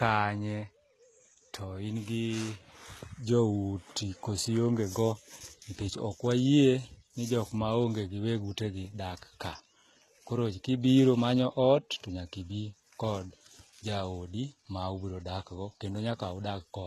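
Throughout the speech, the treble sounds synthetic, with gritty, lispy s sounds, and nothing above 12.3 kHz. This is likely HE-AAC compression at a very low bitrate, around 16 kbps, rebuilding upper bands from copied lower ones.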